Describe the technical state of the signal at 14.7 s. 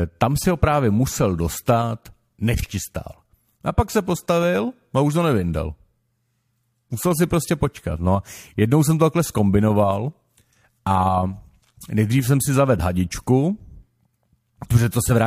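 At 14.7 s the signal is intact, with no dropout, clipping, glitch or other audible fault at that point.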